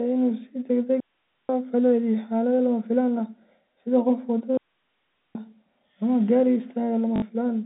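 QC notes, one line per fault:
1.00–1.49 s and 4.57–5.35 s, digital wireless dropout: the sound cuts to near silence for about 0.49 s and then 0.78 s, with very short fades at each edge. The receiver muted after losing too much data. Unlike an analogue radio dropout, there is no burst of hiss or static before or after either gap.
7.16–7.22 s, packet loss with last packet repeated: a 60 ms stretch, which fits three lost 20 ms packets, is filled by replaying the last good packet. The run buzzes at 50 Hz. This sounds like a brief robotic stutter rather than a silent hole, which sets it apart from the dropouts. The 150 Hz to 3.6 kHz telephone band of the G.711 line stays audible through it.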